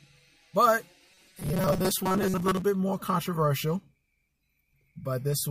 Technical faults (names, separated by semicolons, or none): robotic sound from repeated short buffers